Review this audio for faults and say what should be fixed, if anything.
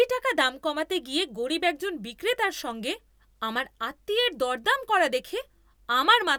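Nothing stood out on listening to this speech recording, so there is nothing here that calls for a fix.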